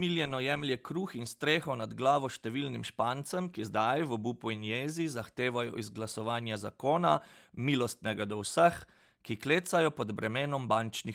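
A speech recording with no technical faults to report.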